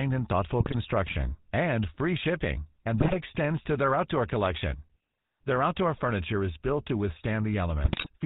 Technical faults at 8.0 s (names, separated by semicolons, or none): GSM full-rate codec; GSM bit errors